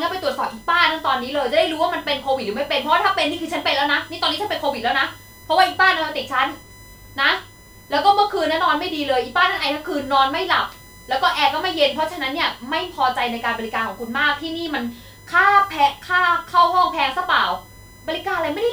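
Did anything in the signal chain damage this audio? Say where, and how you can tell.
Yes. A fixed-pitch USB whine sits under the speech from start to finish, built on 1 kHz with its strongest component at the 2 kHz harmonic, roughly 30 dB below the signal. That's an analogue wiring problem: the USB bus pulls current in 1 ms frames, and that pulse train is getting into the audio through shared power or ground. The 1 ms frame rate is exactly why the whine lands on 1 kHz and its multiples.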